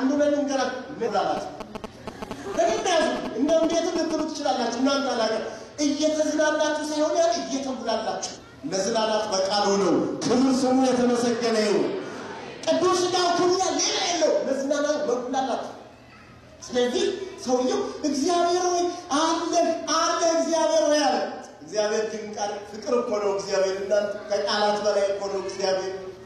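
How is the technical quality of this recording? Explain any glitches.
The technical quality is compromised by two kinds of glitch: three brief decoding errors and a stretch of mobile-phone interference.

Damaged data in a compressed stream occurs at 1.03–1.09 s, 8.32–8.38 s and 13.52–13.58 s. Corrupted bytes make the decoder misread frames and resynchronise, producing a short blip. Unlike GSM noise, these are isolated, irregular events.

GSM signalling bursts run from 1.37 to 4.21 s. A nearby 2G phone's radio bursts are rectified by the audio circuitry, giving a galloping dit-dit-dit of short buzzes at about 217 Hz. Its level is only slightly below the wanted sound. Its rhythmic, repeating pattern distinguishes it from the single decoding blips.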